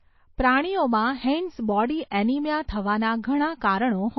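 Throughout the speech there is nothing above 5.8 kHz, and the damage is plainly audible. The likely cause is MP3 compression at a low bitrate, around 24 kbps. Short of bits, the encoder cuts the treble and drops weak detail. The sound turns dull and watery.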